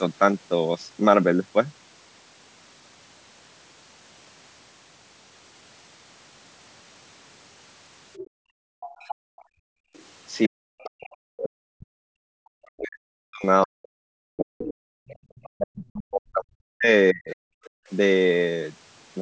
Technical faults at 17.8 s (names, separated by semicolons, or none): other side's voice leaking through; background gated by the echo canceller